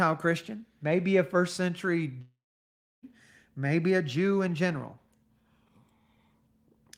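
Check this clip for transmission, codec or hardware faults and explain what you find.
One fault stands out, a long network dropout. It runs from 2.21 to 3.05 s, right after "maybe a first century". The last sound stretches into a fading buzz, then settles into about 0.68 s of near silence. The sound resumes at "maybe a", with about 0.82 s missing. The likely cause is that no packets arrived, so the receiver filled the gap with concealment.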